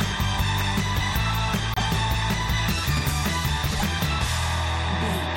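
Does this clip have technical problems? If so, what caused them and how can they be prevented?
Yes. Corrupt frames were decoded: bit errors in compressed frames went undetected and the decoder played them, so misread gains and codes put energy at wrong frequencies. The result is brief glitches, peaking around -15 dBFS and heard as a chirp, squeak, blip or burst of noise, at 1.74 to 1.82 s and 3.71 to 3.83 s, each a few frames long. Checking every frame with a checksum and concealing damaged frames instead of decoding them would prevent this.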